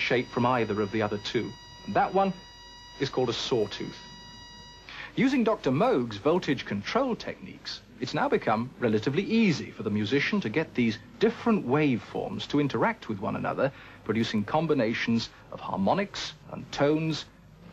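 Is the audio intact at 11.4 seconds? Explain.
Yes, at 11.4 seconds the audio is intact, with no dropout, click, distortion or other technical fault at that moment.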